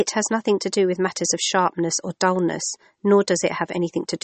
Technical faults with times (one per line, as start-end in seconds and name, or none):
0.00-4.24 MP3 compression